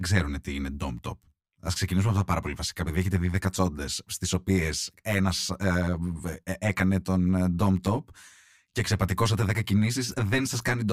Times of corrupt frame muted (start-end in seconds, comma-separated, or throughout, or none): none